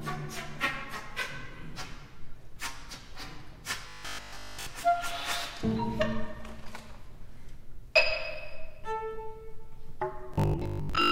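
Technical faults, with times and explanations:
3.89 to 4.67 s and 10.34 to 11.11 s, robotic sound from repeated short buffers: a rigid 50 Hz buzz replaces the sound, likely from a 20 ms chunk looping. The first stretch is entirely repeats, the second mostly.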